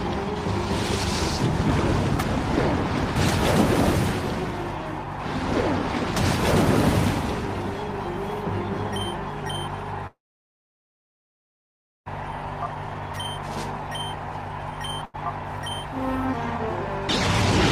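At 3.16 s there is a brief garbled moment lasting until 3.32 s, caused by chunks out of order. A 40 ms block of sound arrived late and plays three blocks after its proper place, so the following material comes first and then the stray piece. Nothing is lost, but there are three hard joins around a jumbled instant. On a spectrogram they show as thin vertical lines where the harmonics break and resume at mismatched positions. The waveform has abrupt steps at each join.

From 10.07 s to 12.08 s comes a call audio freeze, most likely from packets held up in transit until the jitter buffer ran dry. The last sound is carried on for only a moment as a fading buzz, then about 1.9 s of silence follows before the audio resumes from exactly where it stopped. Nothing is missing, but a gap of about 2 s has been inserted and all later sound is delayed by that amount. The spectrogram shows a short smeared tail, then a blank band. 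The waveform goes flat.

From 13.77 s to 15.89 s a jitter buffer speed-up trims the excess delay by repeatedly removing tiny pitch-period slices, about a tenth of a second in total. The sound runs roughly 4% fast at unchanged pitch. A second, much stronger speed-up from 16.37 s to 16.78 s runs at 130% and removes about 150 ms, so that stretch sounds clearly rushed. In both, the spectrogram's harmonics stay at the same height while events arrive compressed in time. The waveform shows cycles periodically dropped without level changes.

Inside the first speed-up, at 15.05 s, a short stall from a late packet holds the current sound for 90 ms until the packet turns up. Playback then continues from the same point. It is heard as a momentarily frozen sound with a slight buzz or dip. The spectrogram shows a flat, horizontally stretched patch, and the waveform a run of repeated, near-identical cycles.

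At 16.32 s playback skips ahead. About 0.7 s of sound is dropped and the two sides are joined with only an 8 ms bridge, so the audio lurches forward with a near-seamless jump. The spectrogram shows content changing abruptly across a single narrow line, and the waveform an envelope discontinuity with no gap.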